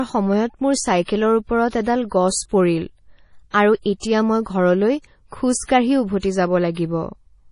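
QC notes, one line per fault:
Throughout, MP3 compression: treble cut off above 10.6 kHz, heavy watery swirl as weak bands drop in and out, which fits likely encoding near 32 kbps.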